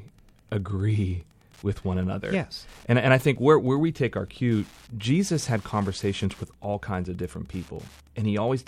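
Wi-Fi interference runs through the whole clip. A steady tick repeats every 102.4 ms, about ten times a second. The audio circuit picks up and rectifies a nearby Wi-Fi radio's beacon. The ticking sits around 35 dB below the speech.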